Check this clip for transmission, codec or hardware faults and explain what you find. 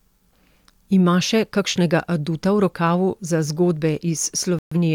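There's one fault here, a digital broadcast dropout near the end of the speech, from about 4.59 to 4.77 s. The receiver stopped getting frames it could decode, either because the signal went or because frames failed their checksum, so it muted until clean ones arrived. You hear the speech cut to silence for about a fifth of a second before it picks up again, and that stretch of speech is simply gone. The hole fits roughly three lost frames, around 128 ms of programme.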